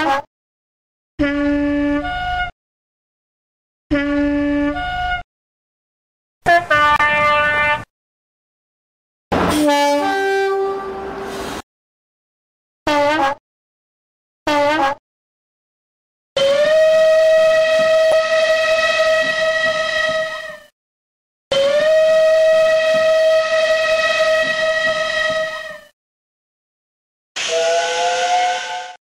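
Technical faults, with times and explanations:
6.96 to 7.01 s, damaged data in a compressed stream: there's a short glitch lasting about 45 ms where a stretch of the encoded data has gone bad. The decoder hits frames it can't make sense of, either rendering garbage as audio or dropping them. It then loses its place in the stream and has to hunt for the next valid frame header before clean sound resumes, which is why you get a brief chirp, squawk, click or short hole there.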